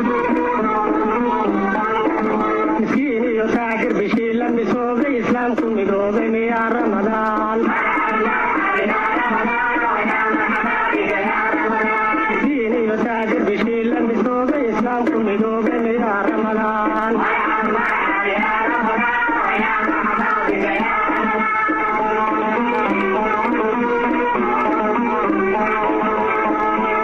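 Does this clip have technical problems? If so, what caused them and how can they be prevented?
No, nothing technical jumps out here, so there's nothing to trace back or guard against this time.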